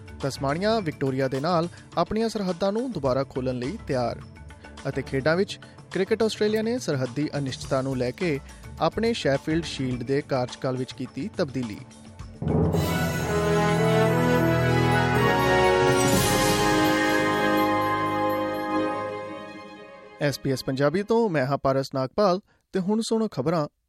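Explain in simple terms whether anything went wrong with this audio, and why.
Nothing went wrong here.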